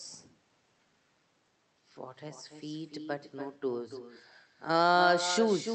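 From start to finish, every phrase is trailed by a fainter, thinner copy of itself arriving roughly a third of a second later, sitting about 9 dB below the direct speech. This is echo with no canceller: the far end is playing the call through a loudspeaker, its microphone picks that sound back up, and nothing strips it out, so the talker hears themselves return after the network round trip. Underneath it, the call codec's band tops out near 8 kHz.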